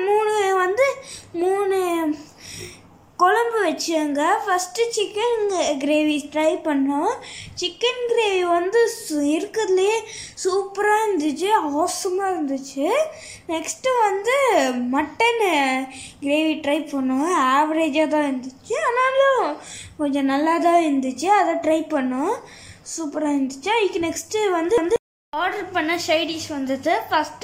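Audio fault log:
Nothing to log here, as there's nothing wrong to pick out anywhere in the clip.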